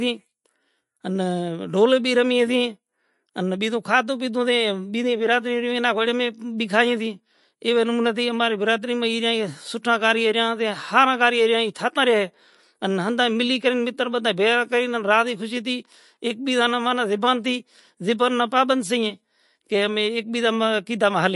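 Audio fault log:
Throughout, MP3 compression: nothing comes through above 11.3 kHz, so the top end just stops and the speech sounds dull, with plainly audible watery, swirly smearing on the s sounds and consonant attacks. That's likely an MP3 encoder starved for bits, which fits a low rate around 48 kbps. It chops off the treble at a fixed point and drops quiet frequency detail that flickers in and out from frame to frame.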